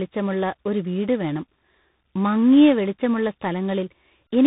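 Tandem speech coding runs the whole way through: roughly three codec passes, likely ADPCM then CVSD twice, stacking up a rough, noisy sound with nothing above 3.8 kHz.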